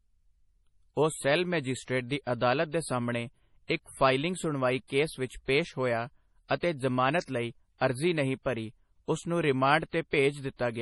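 Throughout the speech, the treble stops dead at about 11.5 kHz and the sound turns watery and swirly, with metallic chirps on s sounds. This is most likely MP3 compression at a bitrate around 32 kbps. Weak frequency lines drop in and out between frames, so the damage shifts constantly rather than sitting as the steady dullness of a simple low-pass filter.

From 10.11 to 10.13 s, a short hiss lasting about 28 ms runs ahead of a sharp attack, which lands soft and smeared. This is pre-echo. The codec spread quantisation noise across a block in which the loud onset came late, so the noise filled the quiet moment before it. A click would be a single spike, and this is a brief noisy lead-in instead.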